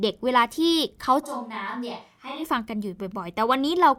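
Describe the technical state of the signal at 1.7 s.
At 1.7 s the speech sounds suddenly roomy and hollow, thinner in the bass and roughly 10 dB quieter, with room noise sitting around 35 dB below the voice. The change snaps in at 1.25 s and snaps back at 2.42 s. That pattern points to a switch to a distant microphone: the close microphone's signal likely dropped out, leaving a pickup farther away that captures more reflections and ambience and less low-end body.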